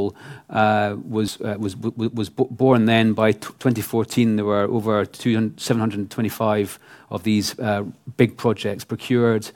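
At 1.28 s, just before "uh was was born", the speech jumps forward: compressed frames skipped, roughly one 93 ms frame lost.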